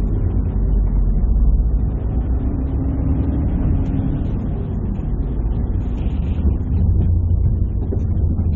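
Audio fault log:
No technical faults can be heard in this recording of sounds, and the signal stays continuous throughout.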